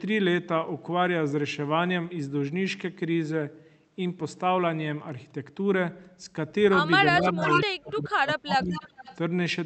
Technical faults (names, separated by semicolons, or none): speech suppressed in double talk; echo leak